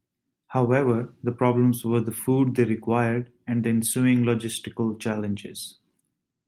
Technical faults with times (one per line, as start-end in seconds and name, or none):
none